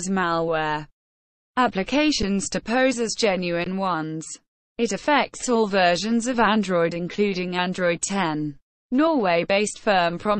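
At 2.22 s the output buffer runs dry for about 8 ms, an underrun with held sample: the converter freezes on its last value instead of dropping to zero, so the sound briefly flatlines with almost no click. The same happens from 3.64 to 3.66 s, a 20 ms hold. In both cases nothing is lost; playback resumes exactly where it paused, so each gap closes with only a soft edge rather than a sharp click.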